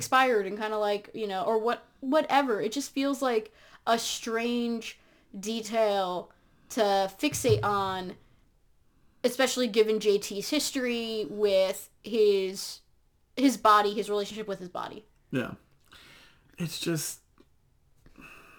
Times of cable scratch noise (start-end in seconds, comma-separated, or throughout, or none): none